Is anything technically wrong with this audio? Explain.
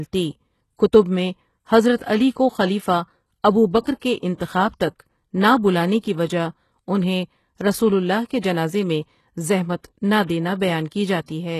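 Yes. Throughout the speech there is plainly audible damage, most likely from HE-AAC compression. Nothing is present above 12.3 kHz, and the treble that remains has been synthesised from lower bands rather than coded directly, which fits a bitrate around 16 kbps. Because the upper harmonics are copied and only coarsely shaped, they don't line up with the real ones below the crossover, so s sounds come across gritty, metallic or lispy.

There is also pre-echo at four attacks: 1.97 to 2.00 s (32 ms), 3.80 to 3.85 s (51 ms), 4.36 to 4.40 s (37 ms) and 8.41 to 8.43 s (24 ms). In each case the coder's quantisation noise, sized for the loud onset, is spread across the whole transform block and leaks into the quiet moment just before it. Each attack is heard as a brief hiss that arrives slightly early, leaving the onset soft or smeared.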